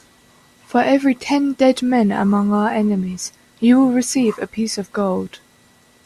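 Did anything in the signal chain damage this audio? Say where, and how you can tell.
No, nothing in the signal chain has damaged this speech recording, and it carries no audible fault from any stage between capture and playback.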